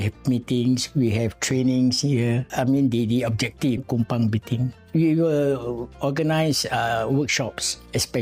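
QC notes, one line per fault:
3.77–3.79 s, stream segment skipped: the sound jumps abruptly ahead with a short blip, likely because one stream segment failed to load and playback resumed at the next. The waveform shows a sudden discontinuity; the spectrogram shows a thin broadband vertical line with mismatched content on either side.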